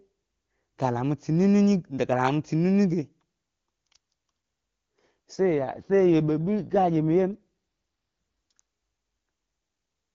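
From 5.35 to 8.60 s there's an AMR rate drop. The HD Voice speech, clean at what sounds like the top AMR-WB rate, turns rougher and more synthetic, which points to the codec falling to about 8.85 kbit/s. The bandwidth holds steady and nothing drops out.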